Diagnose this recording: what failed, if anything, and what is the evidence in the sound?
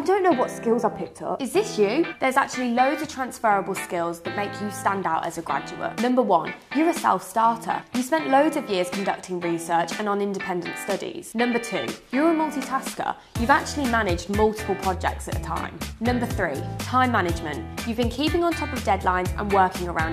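Nothing failed: no stage between capture and playback leaves an audible fault anywhere in the recording.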